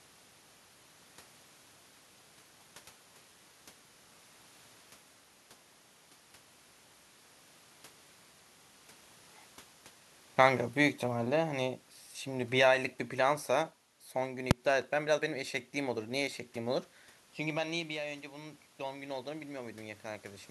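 Around 10.26 s the automatic gain starts falling: the control decided the input was too hot or its background noise too strong and eased its gain down by about 5 dB until 11.78 s, so speech and background sink together. At 14.51 s there's a single sharp bang, invalid numbers at full scale: a calculation blew up and one tiny block, which fits a 128-sample buffer, got pinned to maximum. Just after 17 s the talker seems to back off the mic, dropping the input by about 12 dB, and from 17.97 s to 20.46 s the automatic gain rises by about 6 dB, so the voice and room noise swell back up together.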